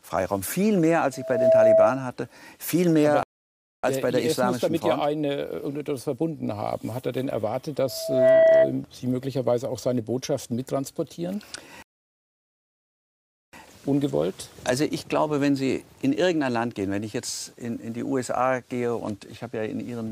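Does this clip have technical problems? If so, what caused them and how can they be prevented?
Yes. A loudspeaker feedback squeal occurs twice. A microphone was picking up the loudspeaker it fed, and at 650 Hz the loop gain rose above one, so that frequency kept reinforcing itself. The result is a single 650 Hz tone that swells over a little under half a second and rides about 10 dB above the rest of the sound, from 1.12 to 2.05 s and again from 7.87 to 8.74 s. To prevent it, lower the gain, move the microphone out of the loudspeaker's coverage, or notch out 650 Hz.

There are also two rebuffering stalls. The player exhausted its downloaded audio and paused until more data arrived. The sound drops to silence and then picks up exactly where it left off, so nothing is lost but time is added: 0.61 s at 3.23 to 3.84 s, and 1.71 s at 11.82 to 13.53 s. To prevent it, buffer more audio before and during playback, or use a lower-bitrate stream when the connection can't keep up.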